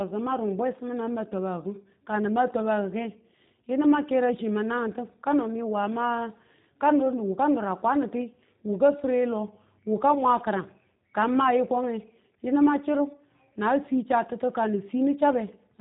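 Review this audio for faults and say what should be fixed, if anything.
The whole clip carries G.729 codec damage, and it is plainly audible throughout. Nothing above about 3.8 kHz survives, so the speech sounds narrow and muffled. The codec does not store the waveform. It rebuilds each 10 ms frame from a vocal tract filter, a pitch predictor and a few pulses. That gives the speech a slightly rough, synthetic edge. This behaviour fits the 8 kbit/s G.729A variant. To prevent it, record or route the audio over a wideband codec such as Opus or G.722 instead of G.729.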